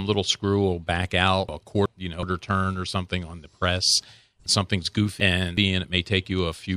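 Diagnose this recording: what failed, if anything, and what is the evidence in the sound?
The speech jumps twice, sounding briefly scrambled: from 1.49 to 2.23 s, and again from 4.46 to 5.57 s. These are chunks out of order at the buffer stage. The audio moves in blocks of about 372 ms, and in each spot one block was written late. It played one block behind its place the first time and two blocks behind the second. Nothing is missing, but the wrong sequence leaves three hard joins in each spot.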